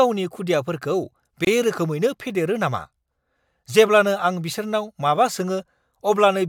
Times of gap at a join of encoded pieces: 1.45-1.47

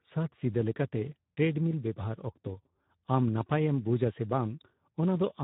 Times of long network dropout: none

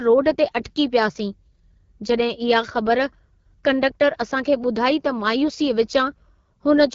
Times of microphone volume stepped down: none

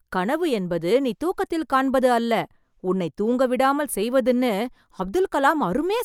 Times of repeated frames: none

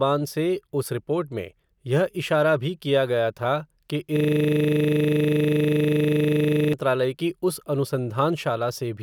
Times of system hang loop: 4.17-6.73

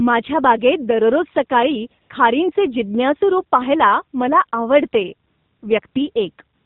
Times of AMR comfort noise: 2.02-2.10, 5.28-5.62, 5.88-5.96, 6.56-6.66

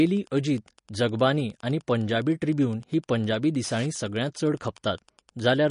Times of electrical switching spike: none

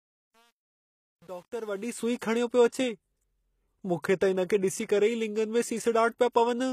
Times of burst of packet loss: none

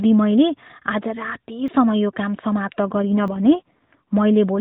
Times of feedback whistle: none

